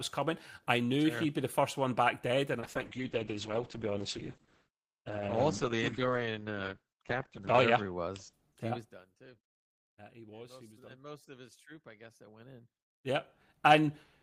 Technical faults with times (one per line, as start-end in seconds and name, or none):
2.60-8.39 call bitrate drop